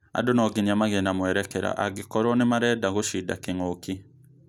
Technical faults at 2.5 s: none

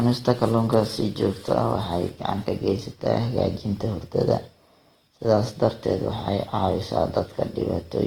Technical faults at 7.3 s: Opus compression

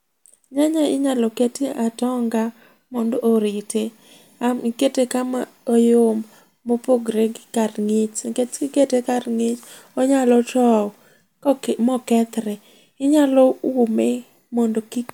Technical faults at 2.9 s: none

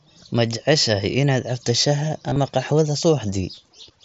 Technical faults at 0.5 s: none

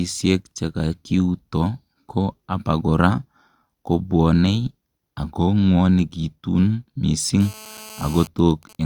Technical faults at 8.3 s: GSM phone buzz; GSM signalling bursts

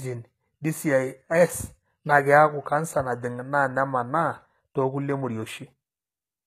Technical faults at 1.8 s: HE-AAC compression

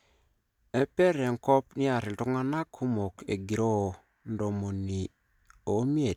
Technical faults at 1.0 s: none

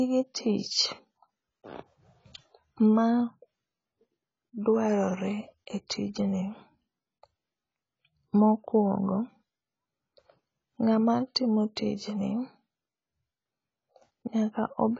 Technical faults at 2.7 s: AAC compression

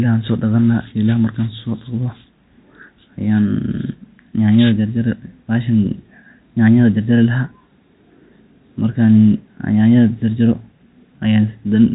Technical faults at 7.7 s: none

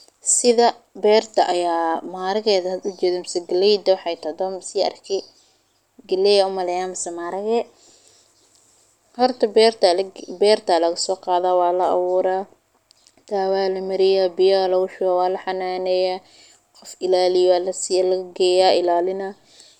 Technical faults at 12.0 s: none

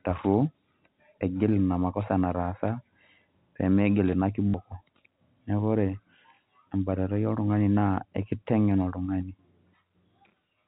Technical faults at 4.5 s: packet loss with last packet repeated

